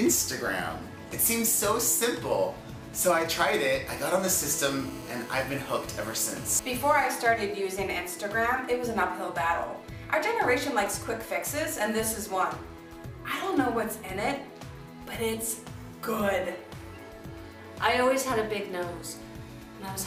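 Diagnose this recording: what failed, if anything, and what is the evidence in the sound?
The analogue wiring picked up GSM signalling bursts from 2.94 to 4.22 s: a galloping dit-dit-dit of brief buzzes at 216.7 Hz, roughly 20 dB under the audio. A nearby 2G phone was handshaking, and the circuit rectified its radio pulses into audible clicks.

Right after, from 4.31 to 7.08 s, a steady GSM phone buzz takes over, a hard, raspy 216.7 Hz tone full of harmonics, about 18 dB below the audio. That's a 2G phone now in a call, transmitting in bursts 217 times a second, with the analogue stage demodulating every burst.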